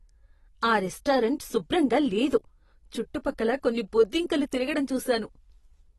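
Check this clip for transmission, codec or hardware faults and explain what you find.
One codec fault runs through the whole speech clip. AAC compression is likely: nothing sounds above 12 kHz, and sibilants smear and warble from spectral holes, pointing to a low bitrate near 32 kbps, unlike a plain low-pass filter.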